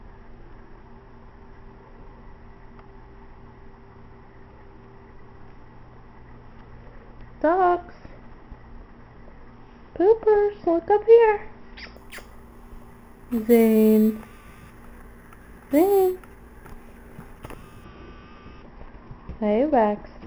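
From 11.96 to 17.84 s there is imaging from sample-and-hold upsampling. Each sample was repeated without smoothing, which fits a 12 kHz to 44.1 kHz conversion. The result is a metallic fizz about 25 dB down. On a spectrogram it appears as a mirrored band from 6 kHz to 12 kHz, and the waveform is stair-stepped.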